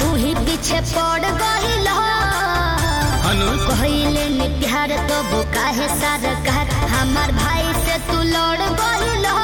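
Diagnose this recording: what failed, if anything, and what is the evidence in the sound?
Mains buzz got into the analogue wiring, most likely through an unshielded lead or a switching dimmer or rectifier spiking twice per 50 Hz cycle. A raspy, steady buzz, with harmonics climbing into the kilohertz range, sits roughly 15 dB below the sound for the entire clip.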